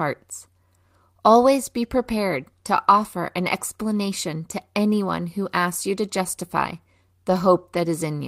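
At 7.29 to 7.35 s, just after "asks you to justify", a lost packet rebuilt from error correction leaves no gap, unlike concealment dropouts. About 40 ms, which fits two packets, turns briefly rougher and noisier.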